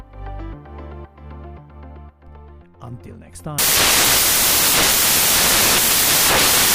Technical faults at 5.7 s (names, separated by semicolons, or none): samples built from the wrong bytes